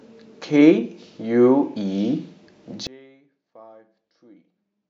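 At 2.87 s the speech cuts out abruptly, with no fade, and never returns. This is an audio dropout to a faint residue. Only a faint leak of sound remains, about 30 dB down. The signal was likely lost while the path stayed live.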